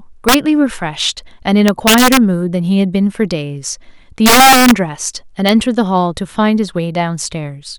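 Integer overflow hits the speech at 0.29 to 0.34 s, 1.68 to 2.17 s, 4.26 to 4.71 s, and at 5.49 s. The signal is pushed about 4 to 5 dB past full scale in the first three. Peaks above the integer limit wrap to the opposite sign instead of being held at the limit, so each flips across the whole range. The result is harsh, violent cracks on loud syllables, far sharper than clipping.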